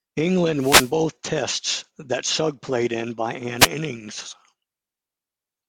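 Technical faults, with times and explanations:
0.58 to 0.93 s and 3.58 to 3.68 s, wireless microphone noise hit: two bursts of static-like swish break into the speech, the first lasting about a third of a second, the second a brief tenth of a second right after "played in by". Here the radio link from an analogue FM mic dips as reflected signals cancel the direct one, so the receiver's own hiss rushes up until the signal recovers.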